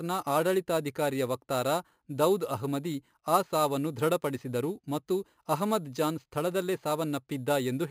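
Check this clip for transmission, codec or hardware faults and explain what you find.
One fault runs through the whole speech clip: imaging from sample-and-hold upsampling, where audio sampled at about 11 kHz was likely raised to 48 kHz by repeating samples without filtering. Mirrored copies from 5.5 kHz to 11 kHz, about 18 dB below the signal, add a metallic fizz that tracks loudness and moves against the pitch.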